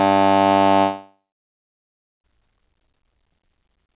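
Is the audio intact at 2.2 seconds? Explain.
No. From 0.8 to 2.25 s, the music was likely interrupted by a long network dropout: packets stopped arriving, so the receiver stretched the last sound into a fading buzz. By 2.2 s, only silence remains, and about 1.4 s of the music is lost.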